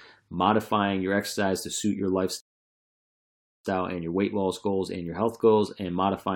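A speech recording interrupted by a rebuffering stall from 2.40 s to 3.65 s. At 2.40 s the speech drops to dead silence for about 1.24 s, then picks up at exactly the point where it stopped. The player exhausted its downloaded audio and halted playback until more data arrived. No speech is skipped or repeated, but the gap stretches the timeline by that 1.24 s.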